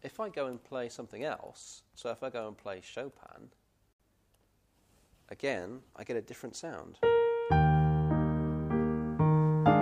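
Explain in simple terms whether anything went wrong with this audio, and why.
At 2.18 s there is a bit error spike: a single sharp tick, unrelated to the surrounding sound. One stored bit flipped, so two samples briefly jumped to a wrong value and snapped back, producing a click that covers all frequencies at once.

From 3.93 to 4.00 s the sound drops out for about 68 milliseconds. This is a gap at a join of encoded pieces. The audio was encoded in separate chunks, which points to pieces about six seconds long. Each chunk's built-in start delay and end padding were left in when they were joined, so the sound stops and then resumes where it left off.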